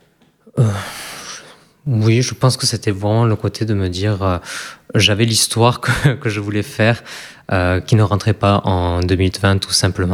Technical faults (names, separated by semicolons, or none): none